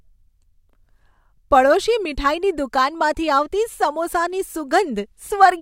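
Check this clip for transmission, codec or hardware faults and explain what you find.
Nothing stood out on listening to this speech clip.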